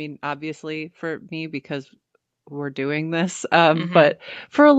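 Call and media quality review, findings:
Automatic gain rising, 0.22 s to end of clip: speech and background noise swell together, steadily, no step. AGC in call mic processing judged input too quiet, ramping gain upward. Unlike a level jump or clipping, noise floor climbs in lockstep with speech. Call path band-limited at 8 kHz, fitting Opus wideband around 48 kbps.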